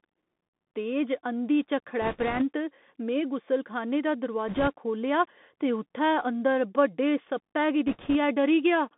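It's a speech clip squeezed through a Bluetooth CVSD headset codec for its whole length, and the damage is plainly audible. The sound sits in a narrow telephone band of roughly 200 Hz to 3.5 kHz, with a grainy hiss under it, scratchy s sounds and roughness on loud bright syllables where the one-bit up/down coder can't slew fast enough. That all fits a 64 kbit/s CVSD link. On top of that there are three bursts of bit errors on the Bluetooth voice link. The first runs from 2.02 to 2.43 s, right after "तेज अंधी". The second runs from 4.48 to 4.68 s, between "गुसलखाने दा" and "खोह्ल्लेआ ते उ'त्थै अंदर". The third runs from 7.87 to 8.16 s, after "अंदर बड्डे सप्पै गी". Each burst is a rushing crackle rather than sharp clicks, because every CVSD bit nudges the waveform only slightly and the error fades out quickly. The error rate sounds like a few percent, a little lighter in the last burst.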